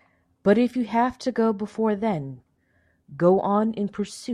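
No technical faults are audible anywhere in this speech recording.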